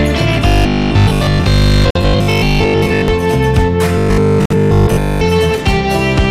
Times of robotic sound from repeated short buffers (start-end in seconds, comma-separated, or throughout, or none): 0.47-3.08, 3.98-5.23